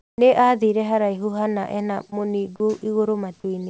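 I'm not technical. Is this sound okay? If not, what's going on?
No, there are a few brief glitches typical of an internet call.

Comfort noise in place of the background, from 0 to 0.18 s: the real room sound is replaced by a plain, featureless hiss, likely because the sender paused transmitting while it heard no speech.

Onset clipped by the voice detector, at 0.16 to 0.18 s: the speech begins abruptly. The likely cause is the sender noticing the sound a moment late and skipping its soft start.

Short concealed packet loss, at 2.10 to 2.14 s, right after "haraihu hana ena": a fiftieth of a second of audio arrived too late, so the receiver patched the gap with a short smear.

Sound dropped by the voice detector, at 2.56 to 2.60 s and 3.40 to 3.44 s: bits of sound briefly turn into plain noise, likely because the sender mistook them for background.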